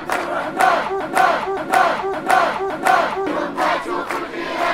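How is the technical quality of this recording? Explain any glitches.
The recording has one clear glitch, a broken-record loop, from 1.00 to 3.27 s. The same 0.57-second fragment plays four times back to back, identically each time. This is likely a stalled player, encoder or stream resending the last fragment it held, so the audio meant for that stretch is lost.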